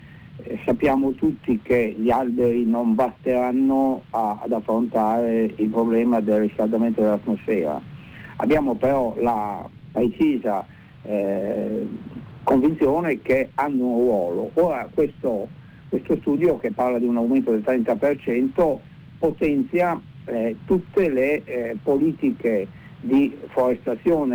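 Sample clock jitter runs through the whole recording: roughly 4 microseconds of timing error adds a roughness about 35 dB down that, unlike steady hiss, follows loud, bright passages and disappears in silence.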